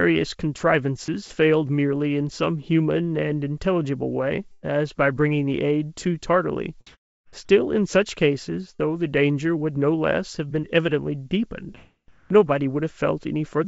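At 0.58 to 0.60 s the speech briefly gives way to a flat, steady noise for about 20 ms, a tiny gap where the real sound simply isn't there before it snaps back. This is sound dropped by the voice detector: the sender's voice activity detector likely judged that moment to be background and stopped transmitting, so the receiver filled the 20 ms with comfort noise instead of the actual speech.

Between 1.06 and 1.30 s the speech turns choppy, with small pieces swapped for a smooth, synthetic hiss and the background flickering between real and artificial texture. About 60 ms in total is replaced across this stretch. This is sound chopped by the voice detector, most likely the detector toggling transmission on and off several times over quiet edges of the speech, with comfort noise covering each off moment.

From 4.52 to 4.65 s a burst of packet loss takes out about 120 ms of audio. The receiver carries the last sound forward for about 110 ms, fading it as it goes, so the listener hears a held, decaying tail. 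The speech then resumes further along, with the section in between gone.

At 6.87 to 7.33 s the background detail vanishes and is replaced by an even, featureless noise about 9 dB different in level from the real ambience, which sits about 39 dB below the loudest speech. A shorter instance at 12.08 to 12.30 s shifts the background by about 5 dB, where the ambience sits about 32 dB below the loud parts. Both are comfort noise in place of the background. During a pause the sender likely switched to discontinuous transmission, and the receiver synthesised noise roughly matching the background until speech returned.

Around 8.75 to 8.81 s there is a quick smear in the speech, a brief wobble where about 40 ms never arrived. This is short concealed packet loss: the decoder bridged the hole by extending the preceding sound for those 40 ms and then crossfaded back into the real signal, which leaves a blur rather than a gap.

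Throughout, nothing sounds above 8 kHz, which fits the G.722 codec of the call path at 64 kbps.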